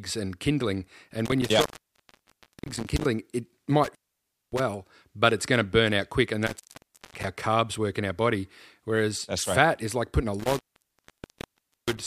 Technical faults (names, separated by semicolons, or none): intermittent contact